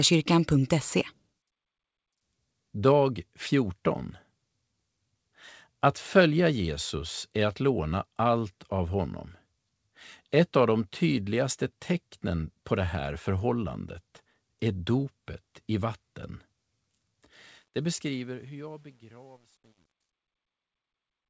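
A speech clip that carries truncation distortion on its closing fade-out. The fade starts around 17.5 s and runs to the end at 21.29 s. Dither is missing, so the quieter level falls onto too few steps. The grain suggests roughly 10 bits. From 18.42 s to the end, the decaying waveform turns into coarse square steps. The tail sounds gritty. The band stops at 8 kHz, which fits a G.722 call path.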